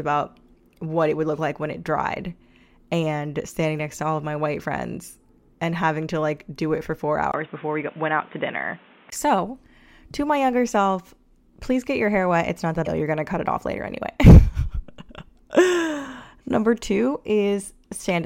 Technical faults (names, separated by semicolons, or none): input switched to a poorer device; damaged data in a compressed stream